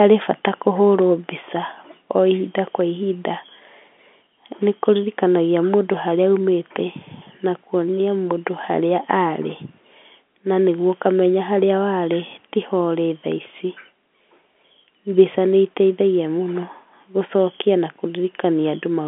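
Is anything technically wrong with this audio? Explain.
No, nothing is technically wrong.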